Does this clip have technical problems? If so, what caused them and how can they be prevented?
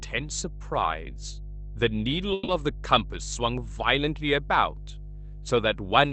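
Yes. A ground loop or a nearby transformer is coupling the power line into the signal, so a steady 50 Hz mains hum with some low harmonics runs under the entire clip. It is strong, sitting nearly level with the speech. Separating the audio and power grounds, or using a ground-loop isolator and keeping cables away from transformers, would prevent it.

A call audio freeze occurs from 2.33 to 2.50 s. Packets were likely delayed in transit, letting the jitter buffer run empty, so the receiver extended the last sound as a fading buzz or hiss for about 150 ms. When the audio resumes, nothing is missing, but everything after arrives 150 ms later. A more stable network connection, or a larger jitter buffer, would prevent it.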